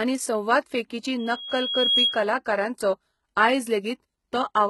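From the start, the speech carries heavy coding damage. Nothing sounds above 11.8 kHz, and the treble is rebuilt rather than real, so s sounds turn gritty and metallic. This is likely HE-AAC compression, with a sound that fits a bitrate near 16 kbps.

At 1.19 s a loudspeaker feedback squeal begins. A microphone is picking up its own loudspeaker, and the loop gain exceeds one at 3.3 kHz. That tone swells over most of a second to a few decibels above the speech. It stops at 2.25 s.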